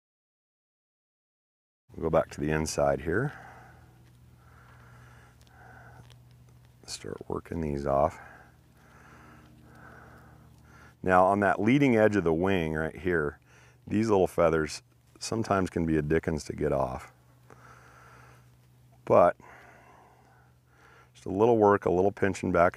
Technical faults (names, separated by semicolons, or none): none